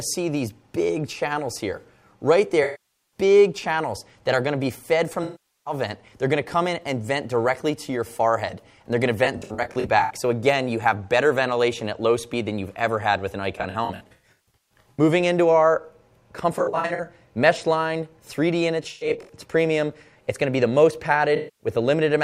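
The audio has AAC frame loss with concealment at 2.63–3.18, 5.23–5.73, 9.24–10.11, 13.58–15.0, 16.52–17.08, 18.82–19.33 and 21.36–21.67 s. The decoder is rebuilding dropped frames from the last good spectrum.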